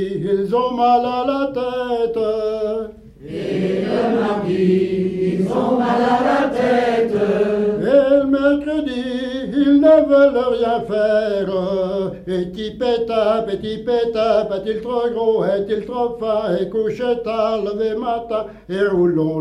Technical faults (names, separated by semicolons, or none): none